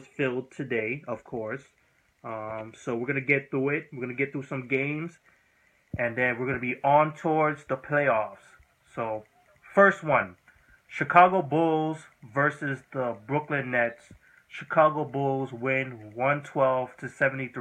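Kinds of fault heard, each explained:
No audible faults of any kind were found in this audio.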